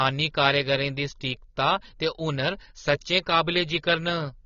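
From start to finish, the speech is dull and band-limited. Nothing is heard above 6.9 kHz. The codec damage is plainly audible. Sibilants sound smeared and fizzy, and sustained sounds carry a warble. The likely cause is AAC compression, AAC-LC at a low bitrate. The sound fits something near 24 kbps. At that rate the encoder lowers its cut-off and quantises the frequency lines coarsely. This leaves gaps in the spectrum, and those gaps blur the fine detail.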